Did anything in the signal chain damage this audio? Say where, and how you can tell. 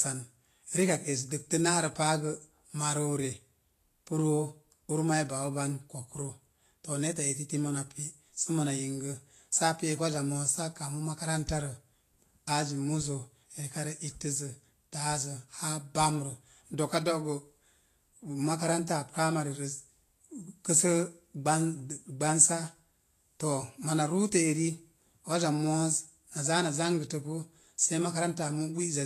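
Yes. Vorbis compression damages the speech throughout, at the codec stage: nothing is present above 14.2 kHz, and the treble sounds hissy and grainy, with roughened tones and smeared consonant onsets. The likely cause is a low-rate Vorbis encode, which fits roughly 33 kbps. The encoder quantised the high-frequency residue so coarsely that fine detail turned into noise.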